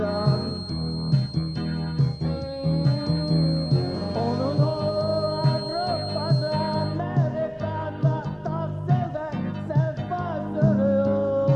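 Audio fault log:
0.00–7.02 s, feedback whistle: a thin, steady tone near 4.2 kHz sits roughly 15 dB below the main sound, swelling and fading slowly in level, likely from a speaker-to-microphone loop held just at the edge of feedback; a spectrogram shows one narrow horizontal line that stops at 7.02 s.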